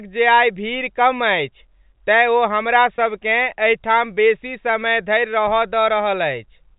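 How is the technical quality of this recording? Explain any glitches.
There is one brief dropout in this telephone-band speech, which carries the usual 4 kHz ceiling of G.711 coding.

At 2.96 to 2.98 s, right after "तेँ ओ हमरा", there is packet loss with pitch repetition. About 20 ms of audio went missing, which fits a single lost packet. The receiver covered the gap by repeating the most recent pitch cycle. Because the gap is so short, the result is a momentary held, slightly buzzy tone rather than silence, and the speech then picks up again.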